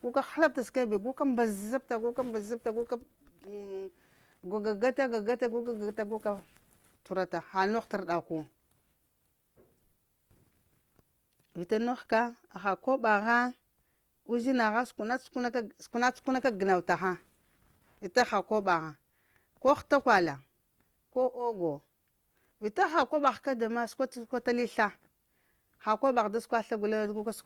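Likely Opus compression, starved of bits in music mode, fills bands with noise throughout, so the speech sounds rough and grainy, which fits about 24 kbps.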